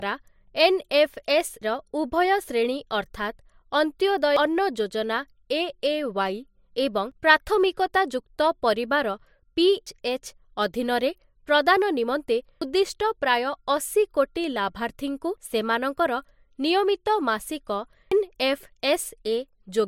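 Speech with audio missing between chunks: abrupt skips at 1.62, 4.37, 7.12, 9.87, 12.62, 15.37 and 18.12 s, each dropping roughly 0.3 s with the sides butted together. The spacing likely reflects 3-second processing chunks losing audio at each boundary.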